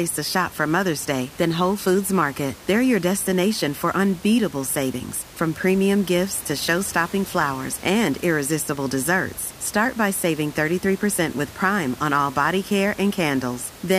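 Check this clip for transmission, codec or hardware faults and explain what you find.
No transmission, codec or hardware fault is audible in this speech clip, and the room noise heard about 20 dB below the voice belongs to the recording space rather than the system.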